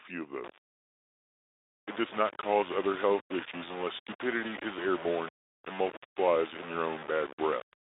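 From about 0.44 s right to the end, the speech carries a grainy distortion that tracks the signal, which is most likely low bit depth without dither. It sounds like only about 4 bits, rounded with no dither, so the error rides along with the speech, roughly 15 dB below it. Quiet passages get gritty and the error moves with the sound rather than sitting as a separate hiss. Underneath, the narrow Speex phone band, with nothing above about 3.8 kHz, comes through as you'd expect.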